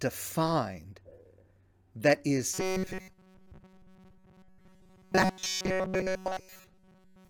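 From 2.54 s, after "that is", robotic sound from repeated short buffers fills the rest: a rigid metallic buzz at 188 Hz, likely a 5.3 ms block replayed while new audio is skipped. Spectrograms show flat, evenly spaced harmonics, and the waveform shows identical repeating cycles.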